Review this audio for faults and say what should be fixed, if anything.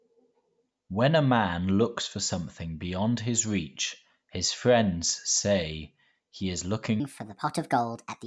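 From 7.0 s to the end at 8.26 s, the speech turns high and hurried: a wrong sample rate fault. Speed rises by 1.38 times and pitch by about 5.5 semitones, which fits 16 kHz audio played at 22 kHz without conversion. On a spectrogram, harmonics and formants jump upward and syllables shorten; the waveform looks compressed in time. To prevent it, resample explicitly whenever the playback rate differs from the recording rate.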